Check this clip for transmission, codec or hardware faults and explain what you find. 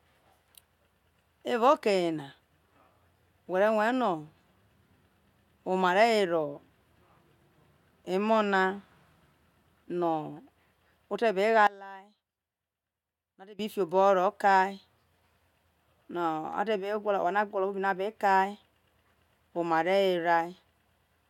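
One fault is present. From 11.67 to 13.59 s the speech drops by about 20 dB to a faint residue, likely from one channel inverted cancelling the centred voice in mono. A plain dropout would fall to silence; this leaves a faint ghost.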